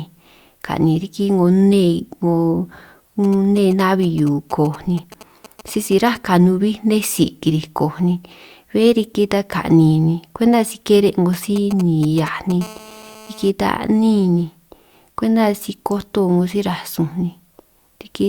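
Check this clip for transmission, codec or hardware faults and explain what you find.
Two kinds of radio interference from a nearby 2G phone are present; both are hardware pickup rather than transmission or codec faults.

GSM signalling bursts, from 3.24 to 6.17 s and again from 11.33 to 12.52 s: short groups of radio bursts, rectified by the audio circuit, produce a galloping dit-dit-dit of short 217 Hz buzzes. They sit roughly 20 dB below the speech in the first stretch and somewhat louder, around 15 dB below, in the second.

GSM phone buzz, from 12.61 to 13.50 s: the phone transmits continuously at 217 bursts per second, as during a call, and the circuit demodulates the pulses into a hard, raspy 217 Hz buzz rich in harmonics, about 21 dB below the speech and unrelated to it.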